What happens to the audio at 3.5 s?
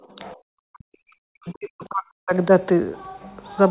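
Nothing goes wrong at 3.5 s; the speech carries on intact there, with only the narrowband sound of a G.711 call line, which has nothing above about 4 kHz.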